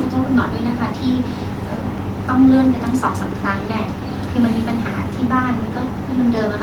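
No technical faults can be heard in this recording.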